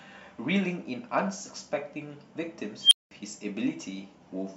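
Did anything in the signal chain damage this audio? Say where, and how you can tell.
Yes, an unstable filter in call processing: at 2.81 s a tone around 3 kHz swells over 100 ms, clips, then overflows into 200 ms of silence until 3.11 s.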